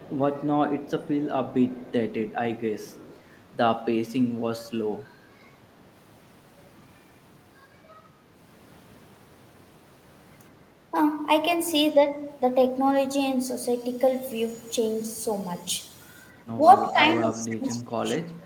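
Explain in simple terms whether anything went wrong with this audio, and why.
Echo leak appears in the first few seconds, from 0.00 to 0.16 s, 0.83 to 1.27 s, 1.50 to 1.92 s, 2.31 to 2.38 s and 2.80 to 3.20 s. A faint copy of the voice trails the original by about a quarter of a second (235 ms). The likely cause is a loudspeaker on one end of the call: its microphone picked up the sound, and the echo canceller didn't remove all of it.

Speech suppressed in double talk begins near the end. The voice dips slightly from 16.56 to 16.62 s and from 16.88 to 17.02 s. From 17.19 s to the end of the clip it is pushed down much further and nearly drops away. This likely happened because both people spoke at once, and the echo canceller couldn't tell this talker from the loudspeaker echo, so it turned both down.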